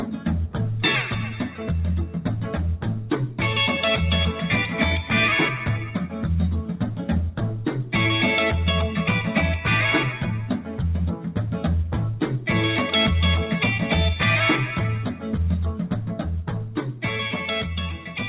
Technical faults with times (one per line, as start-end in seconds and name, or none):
0.00-18.29 noise suppressor applied to music or sounds
2.96-3.11 sound cut by the noise suppressor
5.79-5.95 sound cut by the noise suppressor
16.65-17.02 sound cut by the noise suppressor